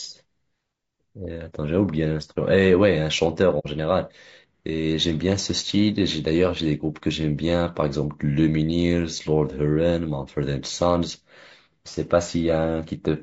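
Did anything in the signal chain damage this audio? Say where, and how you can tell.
Yes. At the codec stage, the speech throughout is rough and grainy, with a noisy fill between the voice harmonics and a thin, artificial-sounding top band. This is plainly audible damage, likely from low-delay AAC compression such as AAC-ELD, at a rate that fits about 32 kbps.

At the network or transport stage, there is a brief hole from 3.59 to 3.66 s, about 60 ms, which fits two consecutive frames going missing. This is AAC frame loss with muting: the decoder zeroed the missing spectrum, and the overlapping windows fade the sound down and back up. What separates it from a buffer dropout or sample-level glitch is the soft edge on both sides of the gap.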